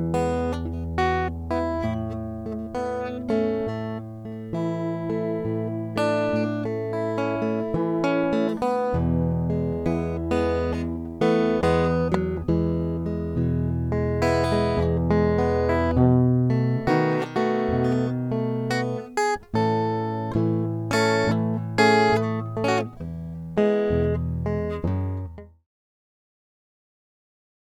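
Nothing to flag in the music: the fade-out from around 25 s to 25.68 s is smooth, with no click or hard edge.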